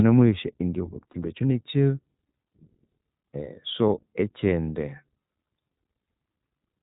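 The iLBC codec runs through the whole clip. Everything above 4 kHz is gone, and the speech has a plainly audible rough, synthetic edge from coding each frame's excitation on its own. The sound fits the 15.2 kbps mode with 20 ms frames.

Lost iLBC frames occur at 1.12 to 1.14 s and at 4.50 to 4.52 s. Each gap is about 20 ms, consistent with a single dropped frame. The decoder fills it by repeating the last pitch cycle blended with noise, producing a brief buzzy, held vowel before normal speech resumes almost immediately.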